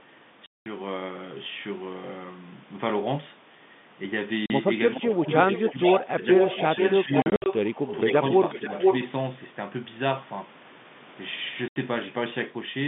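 At 0.46 s the speech drops into a hard 200 ms hole, the first packet loss filled with silence. The waveform falls flat to silence with sheer edges. Shorter holes follow at 4.46 s (40 ms), scattered gaps from 7.22 to 7.46 s totalling 140 ms with runs up to 60 ms, and 11.68 s (80 ms). All are multiples of 20 ms, which fits 20 ms packets. On a spectrogram they show as blank vertical strips across the whole telephone band.

From 4.96 to 5.19 s the level of the speech sags by about 15 dB, most likely speech suppressed in double talk as an echo canceller ducks the signal while the far side is also active. It returns at 5.71–6.18 s and 6.75–7.1 s with dips of about 10 dB, then more mildly around 8.09–8.7 s, about 5 dB. These appear as brief thinning or fading patches in the envelope rather than clean gaps.

From 5.05 to 8.13 s a delayed copy of the speech trails about 0.48 s behind, only about 5 dB quieter. 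This is most likely an echo leak from a loudspeaker path. It recurs from 8.52 to 9.08 s at about 0.49 s delay and roughly equal level. The spectrogram shows a ghost of each syllable's pattern repeated half a second later, sitting inside the 150 Hz to 3.6 kHz telephone band.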